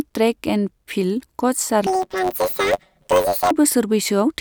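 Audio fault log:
1.87–3.52 s, planar audio read as interleaved: each 10.67 ms block plays left then right at double speed, so you hear a robotic 93.8 Hz buzz.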